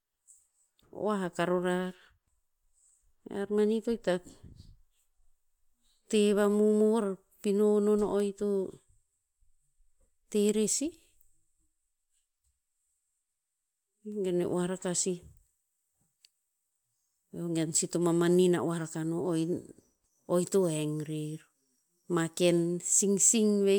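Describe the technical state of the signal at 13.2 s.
At 13.2 s the speech signal is intact, with no audible dropout, clipping, distortion or other technical fault at that point.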